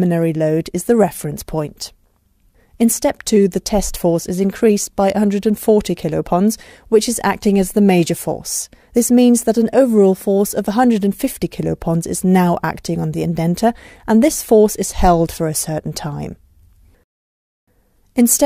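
No technical faults can be heard anywhere in it.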